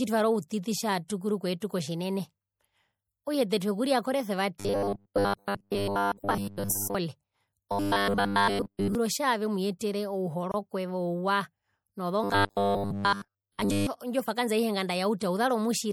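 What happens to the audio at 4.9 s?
Audio was likely arriving too seldom from about 4.60 s to 6.95 s, so the last 10 ms of audio kept being replayed while most of the real sound was skipped. That robotic sound from repeated short buffers locks the speech onto a rigid 100 Hz metallic buzz that only roughly follows the syllables. Underneath, MP3 compression runs through the whole clip, and its plainly audible damage fits a low bitrate of around 64 kbps. The encoder drops the treble above a fixed cut-off and switches weak frequency lines on and off between frames, giving a watery, swirly texture with chirpy sibilants and smeared onsets.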